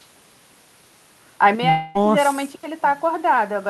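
At 1.55 s the speech abruptly drops by about 6 dB and stays quieter to the end of the clip. This is a channel dropout, likely one stereo channel going silent, so the mono sum keeps only half the shared signal.

From 1.69 to 1.97 s the sound turns into a smeared, fading buzz for about a quarter of a second before normal speech resumes, with a short stretch skipped. This is a long network dropout, likely lost packets, where the receiver filled the 255 ms gap by extending the last sound, and about 260 ms of the original audio was never played.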